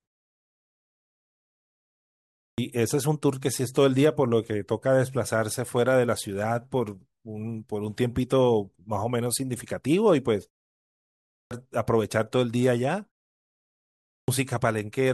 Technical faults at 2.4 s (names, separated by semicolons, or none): clipped start after a pause